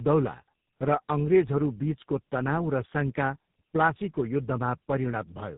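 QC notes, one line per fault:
Throughout: tandem speech coding. Rough, muffled, warbly speech with nothing above 3.8 kHz, pointing to a G.729A-type coder feeding GSM full rate, each recoding the last one's damage.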